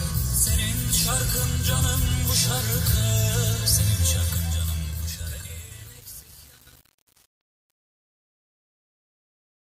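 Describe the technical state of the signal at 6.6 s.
Truncation distortion on a fade runs from 3.95 s to the end at 9.67 s, so at 6.6 s the signal is inside it. The fade-out that begins around 4 s is being rendered by a gain stage that throws away low-order bits without dither, and the coarse steps suggest only about 7 bits are left. As the level sinks, the waveform collapses into a few square steps, heard as grit.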